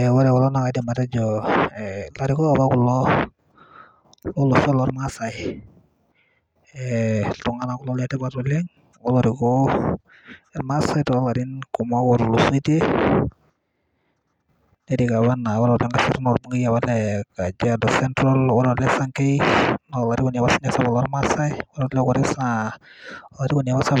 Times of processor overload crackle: none

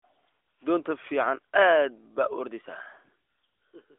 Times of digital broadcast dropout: none

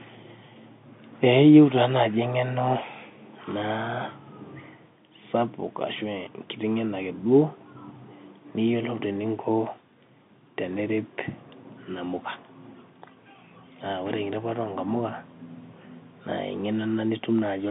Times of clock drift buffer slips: none

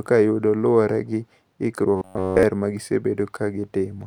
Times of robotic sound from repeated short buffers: 1.96-2.43

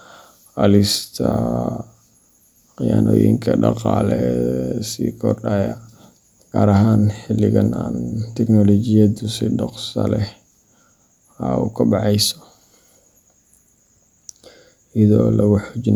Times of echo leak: none

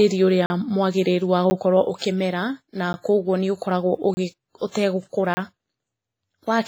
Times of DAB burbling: none

